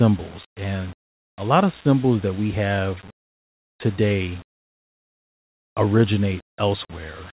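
Nothing in this speech recording stood out as a technical problem on listening.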